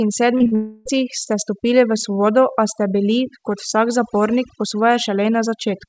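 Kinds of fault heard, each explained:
overdone noise removal: The background drops and breaks up into twinkling specks, as an over-strong noise reducer cuts frequency bands near its noise estimate.
short concealed packet loss: Brief smears and wobbles at 0.38, 0.44 and 0.47 s, each 20 to 40 ms, where missing call audio was patched by continuing the preceding sound.
long network dropout: From 0.55 to 0.87 s the sound becomes a continued buzz or hiss, likely because about 0.3 s of audio never arrived and was filled in.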